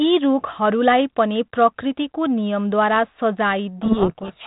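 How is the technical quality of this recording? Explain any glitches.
The recording has one clear fault near its end, heard against the band-limited telephone sound of 32 kbit/s G.726 ADPCM, which passes nothing above 4 kHz.

Codec payload misread, from 3.82 s to the end of the clip: the sending and receiving sides stop agreeing on the bit order inside each G.726 code word. The decoder therefore reads every scrambled code as a valid but wrong difference from its adaptive prediction. The speech becomes buried in harsh, rasping distortion that continues until the clip ends, because the two sides never return to a shared format.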